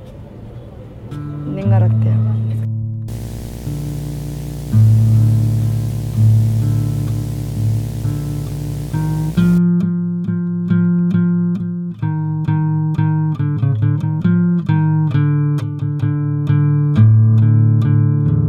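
A screen or video cable coupled into the audio path from 3.08 to 9.58 s, producing video or display buzz: a 60 Hz field-rate buzz with hash above it, roughly 15 dB below the signal.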